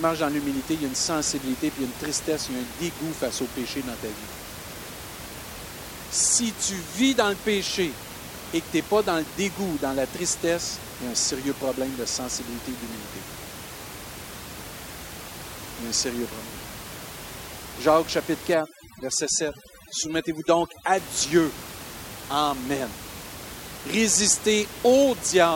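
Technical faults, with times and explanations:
18.54–20.98 s overdone noise removal: an over-strong noise reducer cuts any band near its noise estimate, so the background drops and breaks up into twinkling specks. A spectrogram shows a dark background dotted with specks and holes in faint harmonics.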